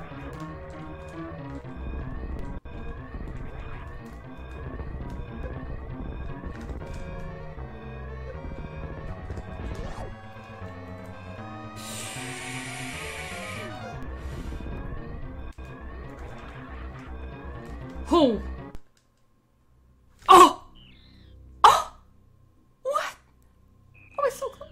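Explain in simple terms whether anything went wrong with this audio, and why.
Three short low thumps occur at 2.39 s, 14.03 s and 18.75 s. Each is a DC step: the waveform's resting level, its zero line, suddenly jumps to a new position, as happens when a converter recalibrates or an input carrying an offset is switched in. That abrupt jump is what you hear as the thump. The offset then fades back to zero over a fraction of a second, and the sound itself carries on unchanged through each one.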